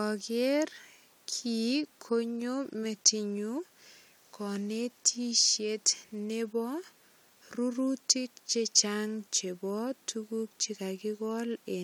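Nothing is technically wrong with this speech recording.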